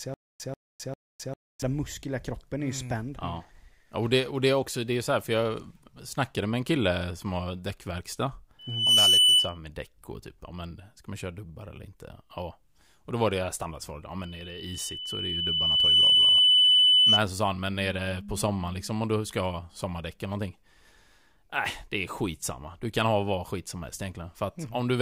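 From 0.00 s to 1.62 s, already under way when the clip begins, the stream likely stalled and replayed its last buffered fragment at each retry before running dry. The result is a stutter with silent gaps: a 139 ms burst of speech repeats three times at a steady 399 ms period, with about 260 ms of digital silence between repeats, until normal playback resumes at "muskel i kroppen är". The speech that belonged in those gaps is gone.

At 8.59 s, after "kille som har däckverkstad", the microphone is picking up its own loudspeaker, and at 3 kHz the loop gain passes one. This loudspeaker feedback squeal rises within roughly a third of a second to about 10 dB above the speech and holds until 9.58 s, ending before "med däck och typ". It returns at 14.22 s, after "var det standardsvaret ja", at the same 3 kHz tone. This time it swells slowly over about two seconds, reaches a similar level, and lasts until 17.21 s, just before "så sa han men".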